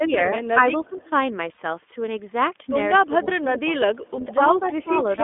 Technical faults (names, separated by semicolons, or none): iLBC codec; speech suppressed in double talk; echo leak; lost iLBC frames